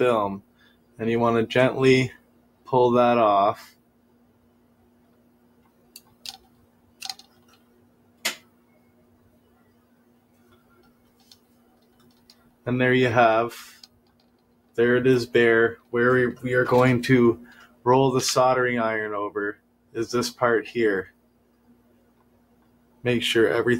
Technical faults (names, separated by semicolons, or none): noise suppressor applied to music or sounds